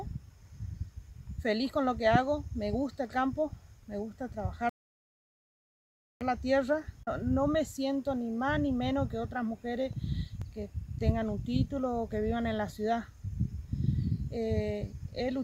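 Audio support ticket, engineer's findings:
Rebuffering stall, 4.69–6.21 s: player buffer ran dry, playback halted awaiting download. Sound drops to silence for about 1.5 s, then resumes exactly where it stopped; nothing lost, time added.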